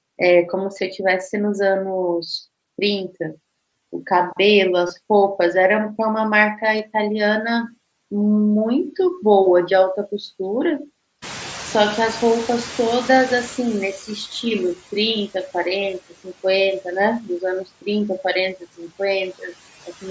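All through the speech you can hear noise suppressor artifacts: the background gets pushed down by about 16 dB, sinking between phrases and coming back up underneath them.

At 4.87 to 4.90 s there's concealed Bluetooth headset packet loss. A short gap got filled by repeating the last stretch of waveform, so you get a brief buzzy tone and then a small warble. The length fits roughly three lost frames. It happens again, shorter, at 6.78 s.

From 11.22 to 14.23 s the noise suppressor is catching up. The room noise jumps by about 21 dB around 11 s and leaks through at first, then settles to about 13 dB down over roughly three seconds as the estimate adapts.

There's speech cut by the noise suppressor at 16.09 to 16.45 s, 18.6 to 19.0 s and 19.83 to 20.05 s. Bits of quiet speech got mistaken for noise and dipped by about 16, 13 and 16 dB. The dips last around 100, 150 and 100 ms and sound swallowed.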